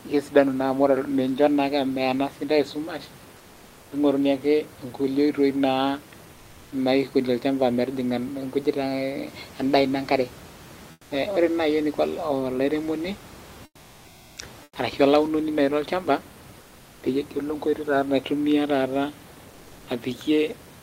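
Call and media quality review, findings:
Comfort noise in place of the background: at 3.37–3.91 s, 6.33–6.71 s, 10.91–11.11 s, 13.65–14.37 s, 14.63–14.75 s and 16.61–17.01 s, the pauses go flat and featureless and about 2 to 9 dB quieter, most at 14.63 s. The room noise sits roughly 25 to 28 dB under the speech. Likely discontinuous transmission, consistent with Opus DTX: the receiver synthesises noise while the sender is idle. Spectrogram: the room-noise texture turns into a smooth, even grey band with a step down in level.

Drift correction step: 8.41–10.49 s, playback runs about 5.3% fast and pitch rises about 90 cents (near a semitone), then snaps back to normal. Likely a clock-matching resampler changing rate in a single step to drain its buffer. Spectrogram: harmonics jump upward together for about 2 s and then drop back abruptly. Waveform: syllable spacing tightens slightly over the same span.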